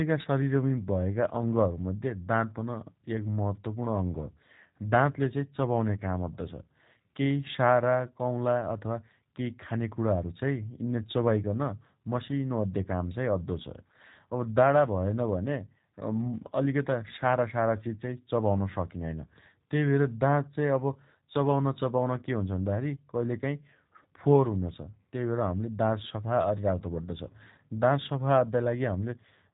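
From start to finish the speech has been through the G.729 codec, and it's plainly audible. Everything above about 3.8 kHz is gone, and the sound comes out a bit rough and synthetic, rebuilt from a vocal tract model and sparse pulses, which fits an 8 kbit/s stream.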